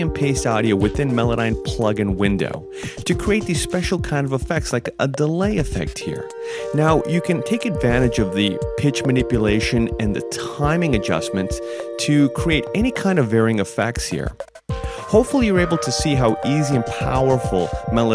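Nothing in the audio stood out as a technical problem on listening.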